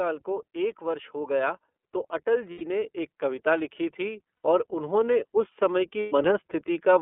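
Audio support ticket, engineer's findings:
iLBC codec, whole clip: speech band-limited to roughly 250 Hz–3.4 kHz, nothing above, with plainly audible rough, slightly synthetic texture. The sound fits iLBC's 13.33 kbps, 30 ms frame mode: each frame's excitation coded on its own. Differs from plain narrowband low-pass filtering by the grainy, buzzy coding roughness riding on the speech, not just missing top end.

Lost iLBC frames at 2.52–2.62 s, 4.42–4.45 s and 6.0–6.13 s: brief held, buzzy-breathy vowel-like fill where speech should continue. The first two fit three lost 30 ms frames, the third four. Decoder repeating the last pitch cycle mixed with noise. Unlike a dropout, there is no silence. Unlike a codec with inter-frame prediction, the voice is right again almost at once after each gap, with no smeared recovery.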